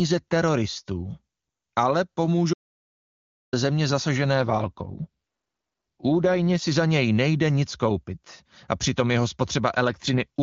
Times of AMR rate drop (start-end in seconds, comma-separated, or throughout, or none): 4.35-6.62, 9.87-10.40